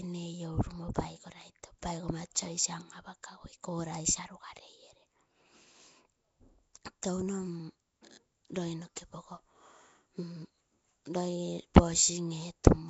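Throughout the recording the speech carries a rough, hissy halo and a smeared, underwater quality, with nothing above 7.7 kHz. This is likely Nellymoser compression: block coding at a fixed, coarse bit budget that leaves weak bands noise-filled, fitting a rate around 32 kbps. At 8.96 s a pre-echo appears. About 10 ms of hiss precedes a sharp attack, because the codec spreads the block's quantisation noise evenly, so noise sized for the loud onset leaks into the quiet moment before it and softens the attack.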